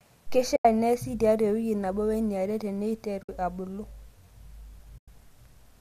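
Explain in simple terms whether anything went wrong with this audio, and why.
The speech drops out briefly three times: from 0.56 to 0.65 s, from 3.23 to 3.29 s, and from 4.98 to 5.08 s, each gap lasting roughly 60 to 100 ms. This is AAC frame loss with muting. Small chunks of the compressed stream went missing, and the decoder filled them with silence. Unlike a hard dropout, these holes fade out and back in smoothly, because the decoder's overlapping windows soften both edges. The slight coarseness elsewhere is likely the low-delay AAC compression.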